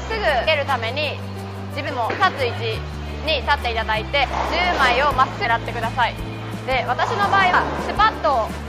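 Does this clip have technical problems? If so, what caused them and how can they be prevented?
Yes. Compressed frames were skipped at 0.47, 1.86, 4.23–4.25, 5.44 and 7.53 s. At each point the audio jumps forward by about 0.15 to 0.4 s. The jumps are multiples of a frame length that fits 23.2 ms frames. To prevent this, verify file integrity after transfer and use error-protected storage or streaming so the decoder receives every frame intact.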